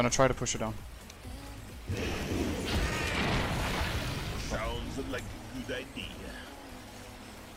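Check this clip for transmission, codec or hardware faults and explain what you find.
Nothing wrong can be heard anywhere in this clip.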